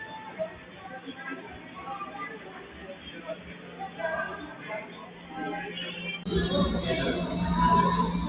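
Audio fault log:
Throughout: noise suppressor applied to music or sounds. A speech-tuned suppressor treats steady tones, ambience and decay as noise, so sustained parts sink while attacks pass. Level swings by about 15 dB, causing pumping and thinning. The band stops at 4 kHz, consistent with a G.711 call path.
0.50–0.86 s, 1.37–1.77 s, 2.36–3.99 s, 4.86–5.31 s: sound cut by the noise suppressor. Here the suppressor misjudged held or fading material as noise and pulled it down by about 5 dB, reaching about 6 dB in the longest stretch, so tails shorten and sustains dip.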